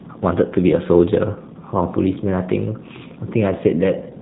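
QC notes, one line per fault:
Throughout: G.729 codec. The speech stops at 4 kHz and sounds rough and synthetic, plainly so, yet stays intelligible. Each 10 ms frame is rebuilt from a vocal tract filter, a pitch predictor and sparse pulses, which fits an 8 kbit/s stream.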